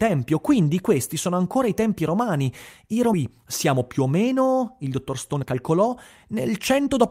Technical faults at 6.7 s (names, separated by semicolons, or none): jitter buffer speed-up